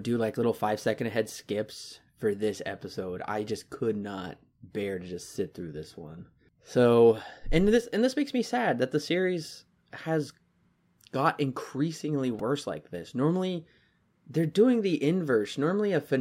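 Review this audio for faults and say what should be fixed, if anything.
At 12.39 s, between "got increasingly" and "like this", a repeated buffer occurs: audio arrived late, so a tiny buffer (about 1.45 ms, which fits 64 samples) was replayed four extra times, producing a brief click-like buzz. A larger output buffer or higher-priority audio thread would prevent it.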